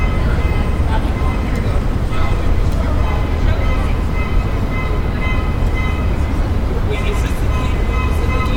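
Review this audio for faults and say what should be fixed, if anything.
Nothing needs fixing; no faults are audible anywhere here.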